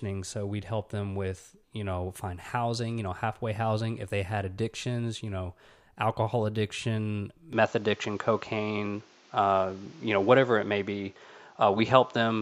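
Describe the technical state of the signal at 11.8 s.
At 11.8 s you're past the switch at 7.53 s: it likely switched to a poorer input device, so nothing above 7.6 kHz, around 5 dB level shift, plus new background noise.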